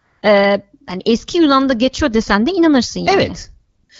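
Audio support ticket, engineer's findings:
AMR comfort noise: sender's voice activity detection flagged silence and stopped sending speech frames at 0.00–0.21 s, just before "e hani eski", and again at 3.75–3.89 s. Receiver filled both gaps with smooth synthetic noise, so the real background drops out abruptly.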